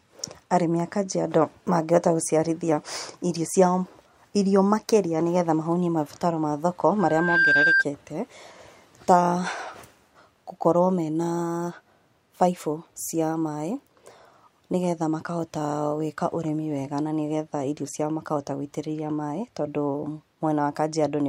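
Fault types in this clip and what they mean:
Loudspeaker feedback squeal: the mic hears its own speaker, so just after "mahũnie mabataro ma thoko" a 1.6 kHz tone swells up, peaking about 5 dB over the speech.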